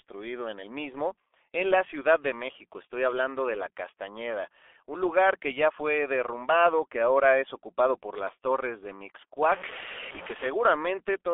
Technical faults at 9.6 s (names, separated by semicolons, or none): G.723.1 codec; stuck bit